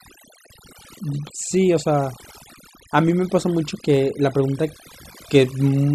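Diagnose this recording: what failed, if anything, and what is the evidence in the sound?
The failure is overdone noise removal, a processing-stage fault present for the whole speech clip. The background between phrases drops. Twinkling specks flicker in it. A noise suppressor set too aggressively is cutting individual frequency bands hard whenever they sit close to its noise estimate. The quieter parts of the voice fall under that threshold and are removed along with the noise.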